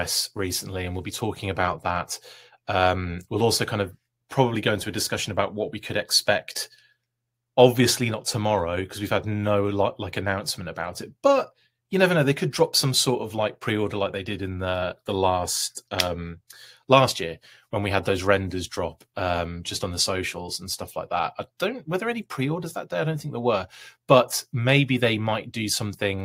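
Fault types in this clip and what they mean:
No faults can be heard in this recording: the signal stays continuous and stable throughout.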